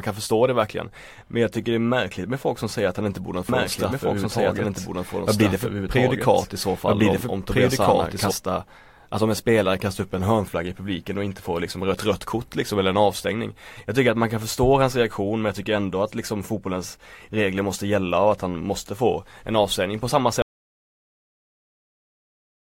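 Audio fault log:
3.49–8.31 s, doubled audio track: after "att han inte borde", a second full-band copy of the speech runs about a second and a half behind, at roughly the same level. It has no decay or room colouring and starts and stops abruptly, unlike an echo. It is likely from a second capture path or misaligned edit.
20.42 s to end, audio dropout to silence: the speech cuts off mid-flow after "en avstängning på samma" and digital silence runs to the end, with no room tone or noise floor, unlike a natural pause. The input was likely lost while recording continued.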